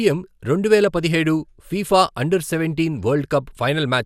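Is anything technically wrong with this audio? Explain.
Yes, there's a quick DAB burbling at 3.12 to 3.17 s, just after "పదిహేడు ఫిఫా అండర్ సెవెంటీన్". Stray bit errors slipped past correction, putting short blips of noise in single sub-bands. It sounds like a few watery blips.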